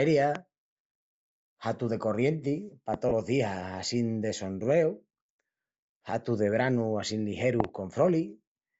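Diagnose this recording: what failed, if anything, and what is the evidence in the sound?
The codec stage is at fault throughout the speech. The wideband grain and breathy upper edge on every voiced sound are most likely Bluetooth LC3 compression, consistent with LC3 near 32 kbps on 10 ms frames. At that rate the encoder zeroes much of the upper spectrum and refills it with shaped noise. Sibilants and vowel tops therefore come out hissy and textured rather than clean, and the damage is plainly audible from start to finish.

Loud pops sit on top of the speech at 0.35–0.38 s and 2.94–2.96 s, each a single sharp click peaking about 15 dB above the signal. At 7.60–7.67 s there is a double pop, two quick hits peaking about 20 dB above. The speech continues underneath each one, which points to an added transient rather than a dropout. The likely cause is an electrical step or a driver glitch in the analogue wiring or output path, briefly shaped and ringing through the stages that follow.

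Lost LE Audio frames on the wireless link cause a brief smeared, noisy patch at 3.09–3.11 s, lasting about 20 ms. That length fits two 10 ms frames dropped in transmission. The decoder covered the gap by reusing the last spectrum with randomised phase, so for that instant the tonal structure of the speech dissolves into a grainy blur. The gap is too short for the concealment to fade into silence.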